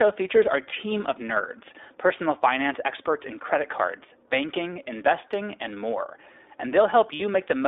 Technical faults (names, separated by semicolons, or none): iLBC codec; lost iLBC frames